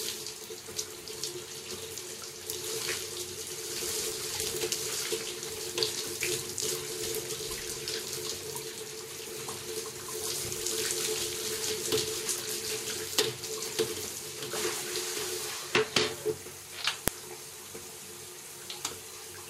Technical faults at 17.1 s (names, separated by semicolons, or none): file header played as audio